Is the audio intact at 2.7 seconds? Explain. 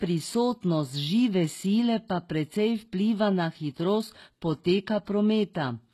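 No. At 2.7 seconds the speech carries the same damage heard through the whole clip, most likely from HE-AAC compression at a low bitrate, fitting roughly 16 kbps. The codec keeps only the lower spectrum and fills the treble by copying lower bands upward under a coarse envelope, with nothing above 12.3 kHz. Those synthetic highs don't line up with the real harmonics, so sibilants come out gritty and metallic, and the artefacts are plainly audible.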